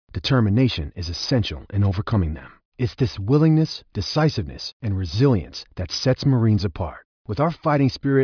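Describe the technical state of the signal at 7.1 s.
At 7.1 s the speech signal is intact, with no dropout, clipping, glitch or other technical fault at that point.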